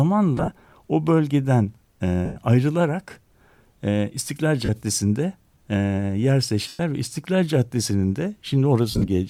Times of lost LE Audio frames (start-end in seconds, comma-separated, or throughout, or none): 0.37-0.51, 2.25-2.36, 4.65-4.69, 6.68-6.80, 8.91-9.08